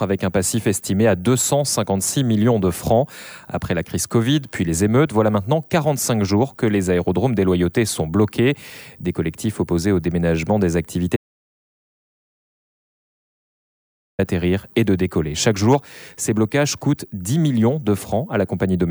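At 11.16 s the sound cuts out abruptly. An audio dropout to silence follows, lasting until 14.19 s. That is about 3.02 s of nothing. The gap is silent, with no room tone or hiss underneath. The likely cause is a lost input, such as a device dropping off or a momentary mute, while recording carried on writing silence. Whatever happened during those three seconds is missing. The sound resumes mid-flow at 14.19 s.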